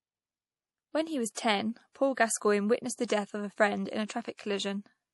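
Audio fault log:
Throughout, MP3 compression: the speech has nothing above 11.5 kHz, so the top end stops dead, and there's a plainly audible watery, swirly texture where weak detail flickers in and out between frames. S sounds get a metallic chirp and consonant attacks smear. That's likely an MP3 encoder starved of bits, cutting the treble and dropping quiet frequency lines, which fits a low bitrate somewhere around 48 kbps.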